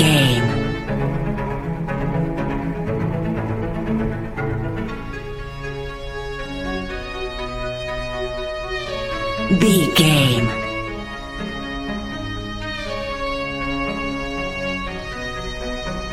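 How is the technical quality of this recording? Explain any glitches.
Nothing technical stands out here; there are no glitches to pick apart anywhere in the recording.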